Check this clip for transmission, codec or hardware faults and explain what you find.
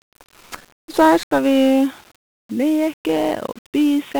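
Two faults are present: heavy one-bit DFPWM compression across the whole recording, and an abrupt narrowing of the band from 1.23 s onward that most likely comes from the input moving to a lesser device.

1-bit DFPWM compression, throughout: DFPWM codes each sample as a single bit that nudges an adaptive level up or down. The encoder can only track the waveform coarsely, so a dense broadband quantisation error rides on everything. Here the damage is heavy, consistent with a one-bit stream at about 48 kbps. The speech has a constant fuzzy, crackling texture, and the high frequencies sit under a layer of hiss.

Input switched to a poorer device, 1.23 s to the end: at 1.23 s there is a gap of about 80 ms, and then the bandwidth collapses to nothing above 3.8 kHz. This is likely the result of the capture path moving to another microphone or a headset call profile with a narrower passband. The loudness stays roughly unchanged, but the speech turns dull and boxy. 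A new, faint background noise floor also appears, well below the speech.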